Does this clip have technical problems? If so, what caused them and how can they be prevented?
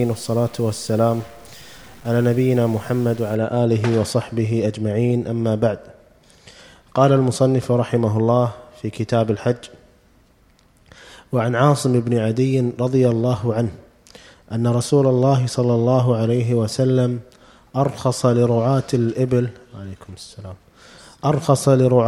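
Yes. A stuck bit runs from 0.0 to 3.35 s: harsh, buzzy distortion over the sound, with a noise floor filling the quieter moments. This likely comes from one data bit held fixed by a faulty line or converter, so values jump by a step of around -40 dBFS. Checking converter wiring and running bit-pattern tests on the signal path prevents it.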